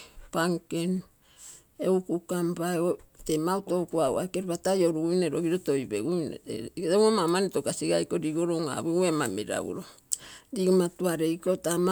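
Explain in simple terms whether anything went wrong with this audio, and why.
Nothing went wrong with this audio, because no fault can be heard anywhere in the recording.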